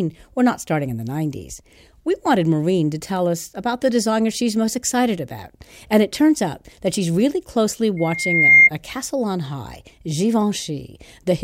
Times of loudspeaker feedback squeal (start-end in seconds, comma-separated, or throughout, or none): 7.97-8.70